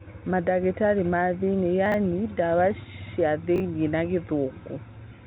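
At 1.86 to 1.94 s and again at 3.56 to 3.60 s, the speech jumbles: chunks out of order. A 20 ms piece arrives late and plays after the ones meant to follow it, three chunks late the first time and one late the second, giving hard joins. All of it sits under the band-limited telephone sound, with nothing above about 3.8 kHz.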